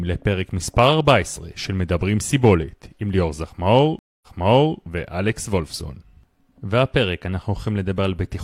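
Around 3.99 s the speech drops out for about 0.23 s. That's a stream reconnect: the connection broke, the player went quiet, then reconnected and spun up a fresh decoder mid-stream. When audio returns it has jumped back about 0.56 s, so you hear a short stretch of speech over again before things carry on. The new decoder eases in rather than snapping back, and the whole disturbance has passed by about 4.78 s.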